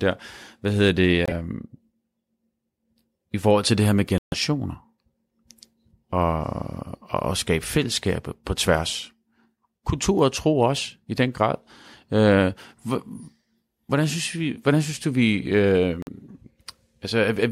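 Damaged compressed frames were rejected by the decoder and replaced with silence, a corrupt frame muted fault that leaves abrupt holes while keeping timing intact. At 1.26 to 1.32 s, just after "hvad hedder", the speech cuts out for 60 ms. At 4.18 to 4.34 s, following "til det her med", a longer 160 ms gap opens. At 16.02 to 16.09 s, after "synes du vi øh", another 70 ms dropout occurs. The lengths fit runs of whole codec frames.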